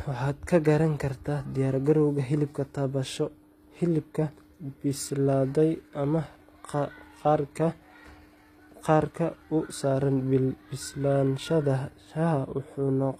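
Throughout the speech, the treble sounds synthetic and gritty, with nothing above 14.9 kHz. S sounds turn metallic. This is likely HE-AAC compression at a low bitrate, rebuilding the highs from copied lower bands.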